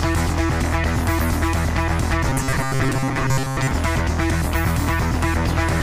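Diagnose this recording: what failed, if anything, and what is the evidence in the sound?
The audio buffer likely starved between 2.29 and 3.71 s. When fresh samples failed to arrive in time, the driver or buffer stage kept replaying the last short block, about 7.5 ms long, instead of the missing material. The result is robotic sound from repeated short buffers: a rigid, metallic buzz at 133 Hz, the block's repetition rate, imposed on the sound. Most of that stretch is replayed fragments, with the real audio skipped.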